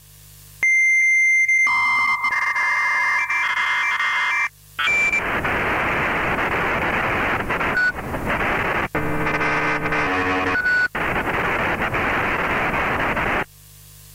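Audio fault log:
No faults can be heard anywhere in this recording of sounds. There is nothing here to time, measure or trace to a cause.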